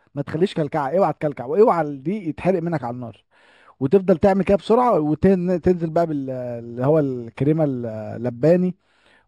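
Speech throughout, with imaging from linear upsampling: the sound points to material at a 12 kHz rate raised to 44.1 kHz by straight-line interpolation. Just below the old 6 kHz ceiling the top is dulled, and faint mirror images sit between 6 and 12 kHz, roughly forty decibels down, giving sibilants a thin metallic shimmer. Plain band-limiting would sound dull with nothing above 6 kHz. Aliasing would fold energy below the ceiling instead.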